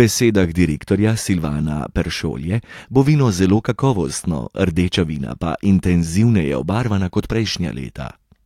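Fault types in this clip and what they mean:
No audible faults in this speech recording; nothing to report.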